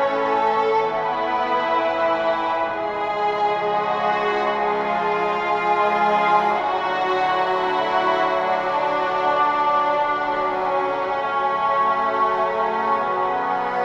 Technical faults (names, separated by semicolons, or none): none